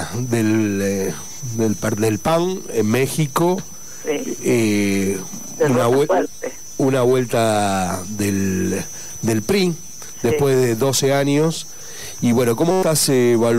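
At 12.71 s a system hang loop sets in and lasts until 12.83 s: playback froze while the hardware kept replaying one 5.33 ms slice of the ring buffer, which fits a 256-sample buffer. It repeats 22 times, producing a steady buzz at 188 Hz and dropping roughly a tenth of a second of sound.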